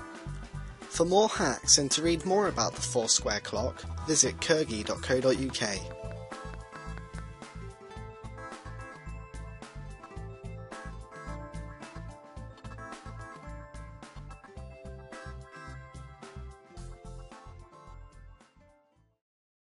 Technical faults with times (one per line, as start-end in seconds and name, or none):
4.86-7.19 train of clicks